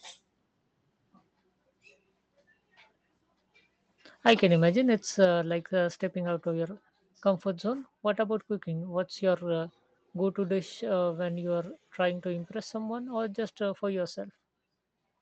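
A short speech clip with two kinds of fault. Microphone overload first appears at 4.26–4.33 s, just before "can imagine it's", with peaks driven about 4 dB past full scale, and again, more briefly and about 1 dB over, at 5.23–5.25 s, between "can imagine it's" and "like uh stepping out". The flat-topped waveform gives a harsh crackle only on the loudest moments, which tells it apart from codec distortion, which smears quiet passages as well. The likely cause is input gain set too high for the converter. Right after that second overload, at 5.25 s, the microphone volume steps down: voice and background drop together by about 5 dB in a single instant and stay there. A compressor or noise gate would pump or recover, and a fade would glide, but this is one clean step that holds. That pattern likely comes from call software lowering the device's input level after detecting clipping.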